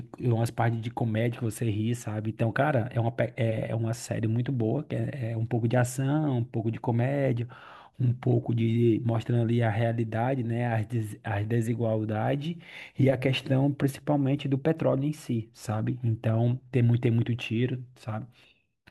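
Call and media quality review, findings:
No audible faults found in this speech recording.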